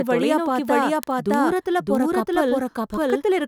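A speech recording carries two faults. Throughout, a doubled audio track is heard: a second, full-band copy of the speech trails the first by roughly 0.7 s at about the same level, so every phrase is repeated over the next. Unlike an echo or room reflection, the copy has no decay and no added room colour. It is an exact duplicate, most likely from the same signal being captured again through a slower path. From 0.12 s to 3.4 s there are also word clock ticks: sharp clicks of uneven strength arriving at a steady rate of about one every 0.07 s, around forty in all. They come from a digital link read by a device on its own unlocked clock, drifting by a few hundred parts per million, so a sample is dropped or repeated at each slip. The regular spacing, independent of the speech, separates them from random dropouts or edit clicks.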